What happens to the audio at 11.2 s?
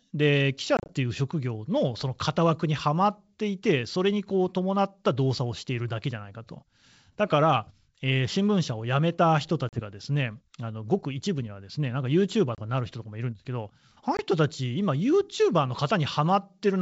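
Nothing goes wrong at 11.2 s: the speech carries straight through intact, with the G.722 wideband telephone coding at 64 kbit/s leaving at most a faint trace.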